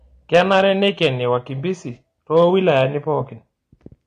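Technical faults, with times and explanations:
Throughout, AAC compression: nothing is present above 10 kHz, and the audio sounds dull and smeared with a warbling texture, likely from AAC-LC coding at a low bitrate near 32 kbps.
0.34–1.07 s and 2.36–2.82 s, hard clipping: peaks are cut flat, about 5 dB and 2 dB over the limit respectively, adding high harmonics heard as crackle on peaks.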